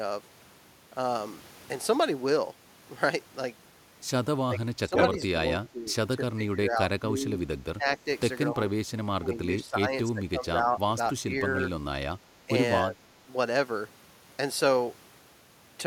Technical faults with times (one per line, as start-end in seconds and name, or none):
4.45-8.07 speech suppressed in double talk
8.51-8.58 speech suppressed in double talk
9.10-11.55 speech suppressed in double talk
12.43-12.50 speech suppressed in double talk
12.82-13.11 speech suppressed in double talk